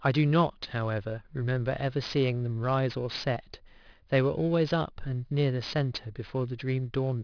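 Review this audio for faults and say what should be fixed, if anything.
Aliasing runs through the whole clip: everything above about 5.5 kHz folds back down, so sibilants come out gritty and metallic, sitting roughly 20 dB under the speech. That fits a resample from 24 kHz to 11 kHz without filtering. Next time, low-pass below the new Nyquist before downsampling.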